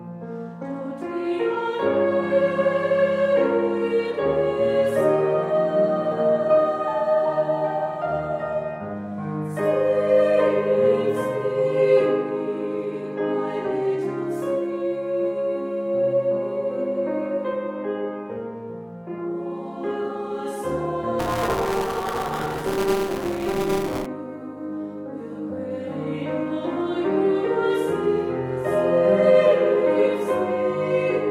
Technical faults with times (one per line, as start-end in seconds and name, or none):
21.19-24.06 buffer tearing